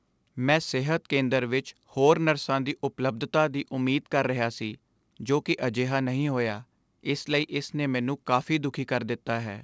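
No technical faults can be heard in this speech.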